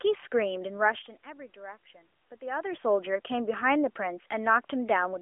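Nothing stood out as a fault when listening to this speech recording.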